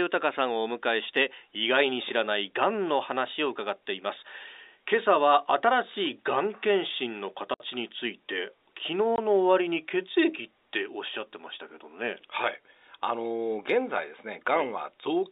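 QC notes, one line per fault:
7.54–7.60 s and 9.16–9.18 s, packet loss filled with silence: the receiver got no audio for these spans and played silence instead, leaving 60 ms and 20 ms holes in the speech, which fits three packets and then one 20 ms packet. The abrupt drop to silence and return at each edge sit over the narrow G.711 telephone band.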